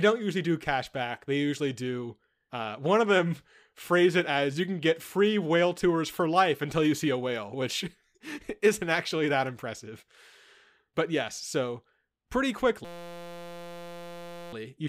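A steady 172 Hz buzz replaces the speech from 12.85 to 14.53 s, before "you should be able". This is a system hang loop replaying one 5.8 ms buffer.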